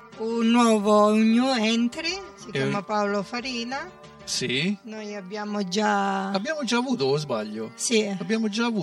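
The audio carries channel delay (comb filtering) from start to finish. One channel arrives roughly 5 ms behind the other, and the two are summed to mono. Content shared by both channels cancels at a series of fixed frequencies. The first notch sits near 100 Hz, and further notches follow at regular intervals up the spectrum. The result sounds hollow and phasey.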